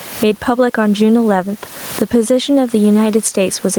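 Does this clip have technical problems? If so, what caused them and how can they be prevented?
Yes. Gain pumping throughout: the room noise, about 33 dB below the speech, swells by around 20 dB in pauses and ducks under each word, likely from excessive input gain driving a fast limiter. Prevent it by lowering the microphone gain and easing the limiter's attack and release.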